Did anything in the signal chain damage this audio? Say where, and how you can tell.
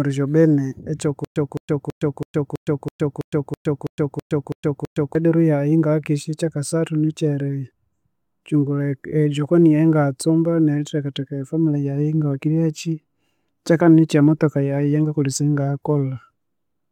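Yes. From 1.25 s to 5.15 s the speech breaks into a stutter with silent gaps: a 214 ms fragment plays, then about 113 ms of digital silence, repeating at a steady 328 ms period twelve times before normal playback resumes. The stage is likely the playback or streaming buffer. It stalled, and each retry replayed the last fragment it held before running dry. The speech that should have filled those four seconds is lost.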